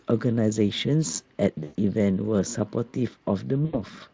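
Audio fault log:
1.63–1.76 s and 3.65–3.81 s, VoIP packet loss concealed by the speech codec: each gap turns into a brief buzzy tone or coloured noise that fades out, and the sound stays thin and distorted for a moment after it resumes. Audio was missing, about 120 ms in the first gap and 80 ms in the second, and the Speex decoder filled it by repeating its last pitch and filter shape at falling gain. Because each frame builds on the one before, recovery lags after the stream returns.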